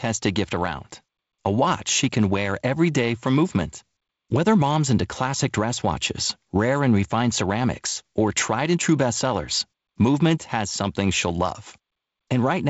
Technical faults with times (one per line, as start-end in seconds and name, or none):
none